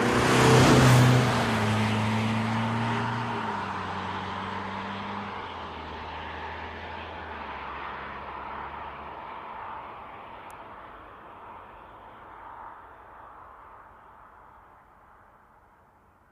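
A recording of sounds with a single electrical switching spike at 10.51 s: a sharp, isolated snap lasting about a millisecond and peaking at about -25 dBFS, sitting on top of the sound without interrupting it. The likely cause is a nearby switch, motor or static discharge arcing and coupling into the audio line. A digital dropout or edit click would break the signal itself, and handling noise would carry a low thump, but this is a brief added transient.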